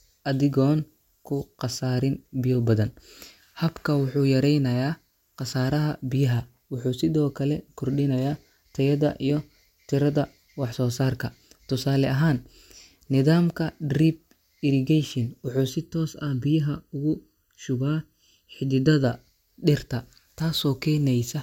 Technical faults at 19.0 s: channel delay (comb filtering)

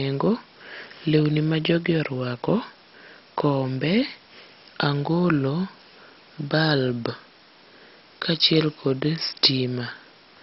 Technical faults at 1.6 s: MP2 compression

